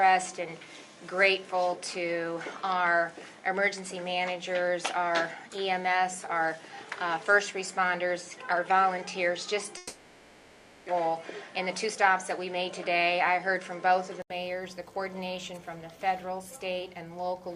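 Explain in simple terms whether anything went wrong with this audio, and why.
Three things go wrong here, and they overlap a bit.

From the very start up to 14.3 s the audio sounds narrower and a little dull, with nothing above about 11.1 kHz. At 14.3 s there's a short gap of about 80 ms, and then it opens up, with a slightly different level and a different faint background. That's most likely an input switched to a poorer device: the first stretch came through a lesser microphone, and the system then changed back to a better one.

Between 9.77 s and 10.90 s you hear a long network dropout, and that's the likely cause of what happens there. About a second of real audio never arrived. The receiver didn't leave a silent hole. It stretched the last bit of sound into a buzzy, fading filler for roughly 1.1 s. When the audio returns, that missing second is simply gone, and the timing has shifted by around a tenth of a second.

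Right after that, from 11.00 s to 11.96 s, there's a jitter buffer speed-up. Audio had piled up after the dropout, so the receiver trimmed tiny slices out to catch up, about 70 ms in total. That stretch plays around 7% fast at the same pitch, so it comes across as slightly rushed.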